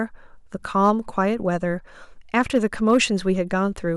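Speech with hard clipping in two stretches, 0.84 to 1.20 s and 2.38 to 2.97 s. Peaks overdrive the stage by about 2 dB, then about 3 dB, and get cut flat, adding crackle on the peaks.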